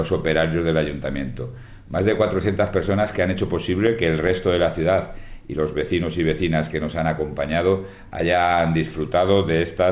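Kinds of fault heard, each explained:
No faults turn up here at all; it simply has the ordinary sound of a call path running G.711 mu-law at 64 kbps, which leaves nothing above 4 kHz.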